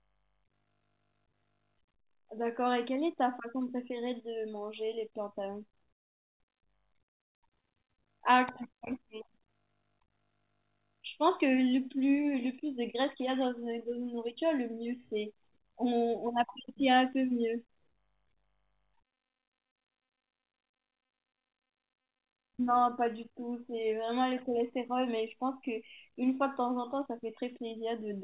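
There are no technical faults to describe in time order, and the speech comes through a call path whose G.711 mu-law coding leaves nothing above 4 kHz, as expected for that codec.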